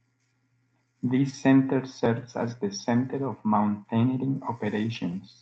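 Nothing in this speech clip points to a technical fault. It has passed through a WebRTC call path, heard as the coding texture of an Opus-style codec and a top end that stops around 8 kHz, which fits a wideband call setting.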